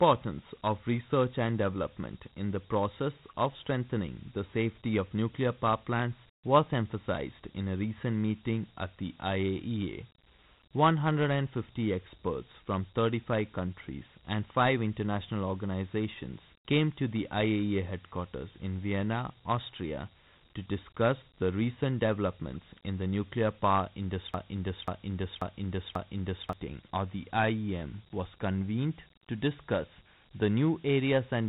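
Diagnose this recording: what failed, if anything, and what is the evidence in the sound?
Codec stage: Dialogic VOX ADPCM. The speech has a gritty hiss riding on it throughout, and the band stops at about 3.9 kHz. That fits 4-bit ADPCM at 8,000 samples a second, roughly 32 kbps. The coarse step-size quantising is plainly audible.

Playback or stream buffer: a broken-record loop. From 24.34 s to 26.53 s, a 0.54 s fragment repeats four times back to back. Something likely stalled and kept re-sending the last fragment it held. The audio that belonged in that gap is lost.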